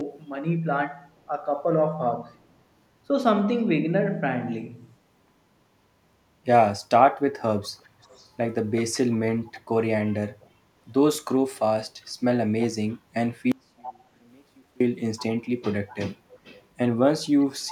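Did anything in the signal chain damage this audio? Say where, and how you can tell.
Yes. Call processing suppressed speech in double talk at 3.08 to 3.12 s. The sound dips about 5 dB for 40 ms, likely as the echo canceller ducked both sides.

Echo leak, also from call processing, at 7.62–8.95, 9.53–9.61, 13.81–14.04, 15.17–15.23, 15.87–16.64 and 17.23 s to the end. A copy trails by 378 ms, about 15 to 25 dB down. The likely cause is a loudspeaker's echo canceller missing it.

An audio dropout to a faint residue runs from 13.52 to 14.80 s. It lasts 1.29 s, and only faint sound about 35 dB down remains. It is abrupt, likely the wanted signal being lost while the path after the break stayed live.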